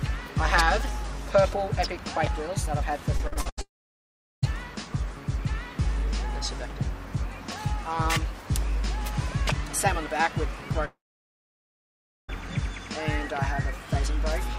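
From 3.17 to 3.59 s, packets were lost again and again, producing repeated packet loss with a robotic sound: five holes, the longest 79 ms, were each patched by extending the last sound, so nearly half the stretch is synthetic and choppy, with about 200 ms missing.

Right after, from 3.61 to 4.54 s, a long network dropout likely cut the stream. About 0.82 s of audio is missing, with a brief fading continuation and then about 0.76 s of silence. A second dropout, from 10.85 to 12.30 s, likely has the same cause. About 1.44 s is lost there, including about 1.32 s of silence, before the sound resumes.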